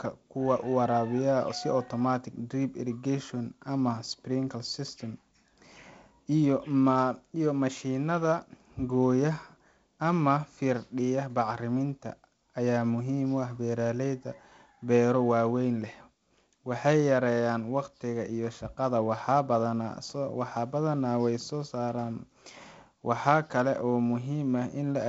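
No technical faults are audible.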